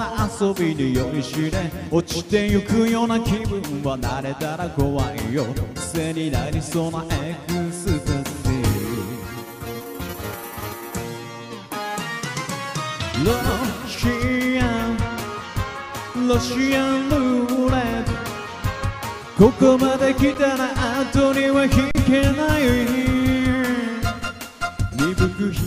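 At 20.34 s and again from 21.91 to 21.95 s, underrun with held sample: the output buffer ran dry, so the waveform freezes flat, about 10 ms then 40 ms, and the sound simply stops. Roughly equal audio went missing.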